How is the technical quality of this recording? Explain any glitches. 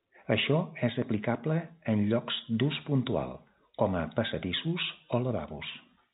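No glitches turn up anywhere in this speech recording; it just has the narrow, phone-line sound of G.711 telephone coding, with nothing above 3.8 kHz coming through.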